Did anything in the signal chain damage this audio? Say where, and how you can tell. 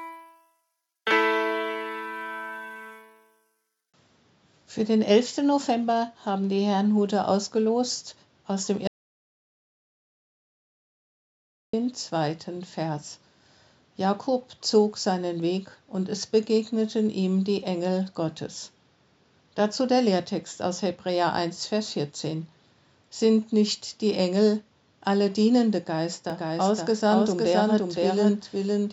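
Yes. At 8.87 s the audio cuts off mid-flow into digital silence with no residual room tone, and it resumes abruptly at 11.73 s, so 2.86 s of material is lost. This is an audio dropout to silence at the capture or driver stage: the input went away, likely through a momentary disconnect, link failure or stray mute, while the recorder kept writing silence. Nothing from that interval can be recovered.

From 26.30 s to the end, a doubled audio track appears. A second full-band copy of the same material enters suddenly, trailing the original by roughly half a second and sitting about 5 dB lower. It has no decay or reverberant colouring, so it is not acoustic echo. The likely cause is a second, slower capture path mixed in or an edit leaving two misaligned copies.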